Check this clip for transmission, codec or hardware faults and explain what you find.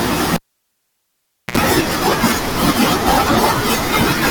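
There is one hardware fault: the cable was pulled and plugged in again, from 0.36 to 1.58 s. A pop cuts the speech to near silence for about 1.17 s. The live connector is then reseated, and while only the tip touches there is a 70 ms burst of 60 Hz mains buzz. A second pop follows as the signal returns.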